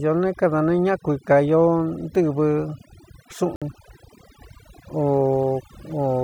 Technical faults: overdone noise removal; Bluetooth dropout

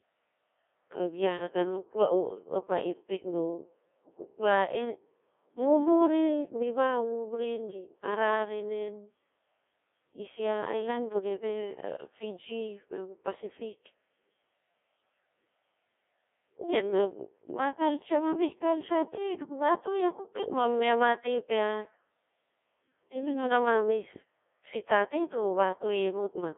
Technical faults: Codec 2 vocoder

